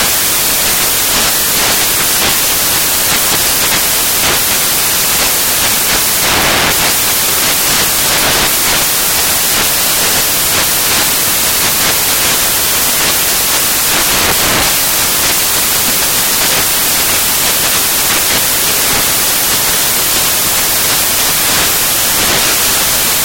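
The audio is replaced throughout by loud, harsh broadband noise. The fault is samples built from the wrong bytes. Each sample's bytes are combined in the wrong order or alignment, so the fast-changing low bits dominate.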